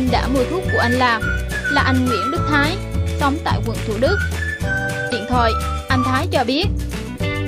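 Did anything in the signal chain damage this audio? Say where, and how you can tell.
Yes. The damage is at the codec stage, and it's a case of damaged data in a compressed stream. You can hear it as a brief glitch from about 5.08 to 5.13 s, roughly 44 ms, that doesn't belong to the surrounding sound. That glitchy character is the giveaway: a stretch of the encoded file was corrupted, so the decoder misread those frames, lost sync and had to hunt for the next valid frame header before playback settled again.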